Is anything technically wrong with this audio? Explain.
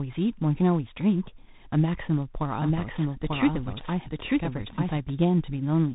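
Yes. Two faults are audible.

Tandem speech coding runs throughout. The speech was coded in turn by CVSD, G.711 A-law and G.726 at 32 kbit/s, so the losses stack up and it sounds rough and noisy. A spectrogram shows nothing above 3.8 kHz.

A doubled audio track runs from 2.54 to 5.12 s. A second, equally loud copy trails about one second behind, likely from a second capture path or a misaligned edit. The waveform shows it starting and stopping abruptly, with no decaying tail.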